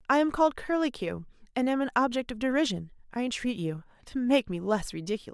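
No technical faults can be heard anywhere in the speech; the signal stays continuous and stable for its whole duration.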